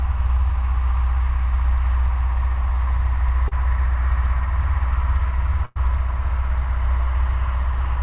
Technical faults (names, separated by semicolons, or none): short concealed packet loss; burst of packet loss